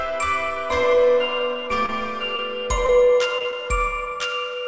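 Short concealed packet loss occurs at 1.86, 2.36, 2.86, 3.38, 3.42 and 3.50 s, a steady half-second rhythm that tightens into a cluster near the end. Each time about 20 ms of audio failed to arrive, and the receiver bridged the gap by extending the preceding sound for roughly 20 ms before blending back. Each repair is a brief smear or wobble, within a call band that stops at 8 kHz, which fits a G.722 codec.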